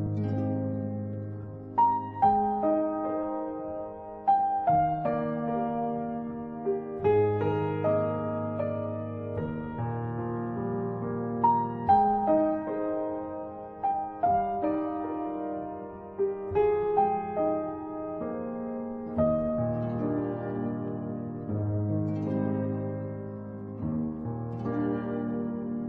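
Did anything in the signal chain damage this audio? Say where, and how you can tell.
No damage from the chain.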